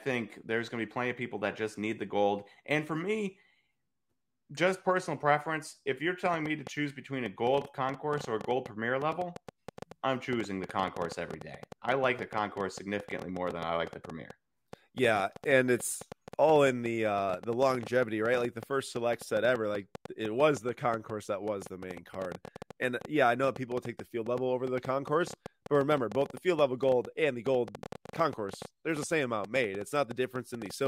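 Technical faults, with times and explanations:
6.26 to 30.87 s, train of clicks: Right after "personal preference if you're", a ticking starts and runs to the end. Some 200 similar clicks arrive unevenly, near 8.4 per second, peaking about 5 dB above the speech. Likely interference from nearby equipment or a faulty connection or power supply.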